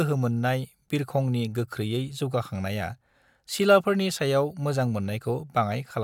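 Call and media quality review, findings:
No faults found in the speech signal; level, continuity and timing show nothing needing a ticket.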